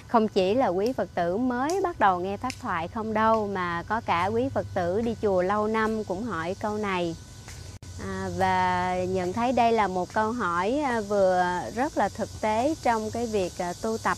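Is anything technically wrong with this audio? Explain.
Yes. At 7.77 s there's a gap at a join of encoded pieces, a 60 ms gap left by untrimmed encoder padding. The sound drops out, then picks up where it stopped.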